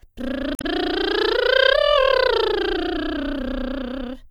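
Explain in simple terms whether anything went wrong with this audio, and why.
A short glitch interrupts the music from 0.54 to 0.65 seconds. That's damaged data in a compressed stream: a stretch of the stored file was corrupted, so the player misread it and briefly lost its place before finding the next clean section.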